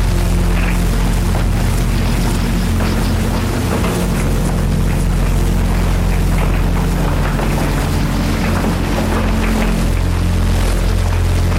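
Hard clipping runs through the whole clip. The signal arrives about 6 dB hotter than the stage can pass, so roughly a tenth of the samples hit the ceiling and are cut flat. On a waveform the peaks show as squared-off plateaus, and a spectrogram shows added harmonics smeared high into the upper kHz range. The sound has a harsh, gritty distortion on its peaks.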